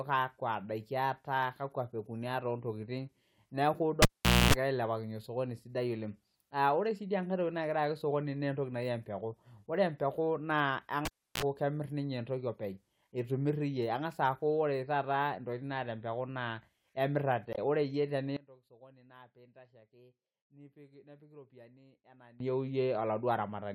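It's a speech recording with three kinds of trouble. First, someone's yanked a live cable and plugged it back in, twice. At 4.02 s there's a pop, the sound drops out for about 0.46 s, then a 60 Hz mains buzz lasts roughly a quarter second while the plug seats, and another pop brings the audio back at 4.54 s. It happens again from 11.05 to 11.43 s, this time with about 0.32 s of dropout and only a quick 47 ms hum before it reconnects. Next, at 17.52 to 17.58 s there's a short glitch. That's damaged data in the compressed stream: the decoder choked on corrupted frames, lost sync and jumped ahead to the next clean frame header, so a few tens of milliseconds come out garbled or missing. Finally, from 18.37 to 22.40 s the speech suddenly drops away, falling by about 23 dB and leaving just a faint remnant. That's the classic sound of one channel inverted being summed to mono. With one side's polarity flipped, the centred voice cancels against itself and only the small left-right difference survives. 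The likely culprit is a reversed-polarity channel somewhere upstream of a mono fold-down.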